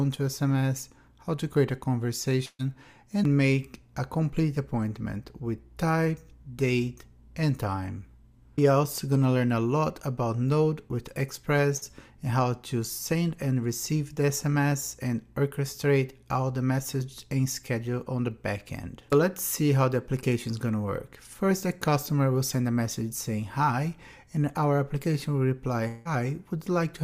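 A burst of packet loss at 2.45 to 2.61 s and 11.77 to 11.84 s leaves about 140 ms and 40 ms missing, filled by a fading continuation of the last sound. A long network dropout is the likely cause at 25.88 to 26.07 s. The last sound is stretched into a fading buzz or hiss for about 170 ms, and the audio then resumes with about 180 ms skipped.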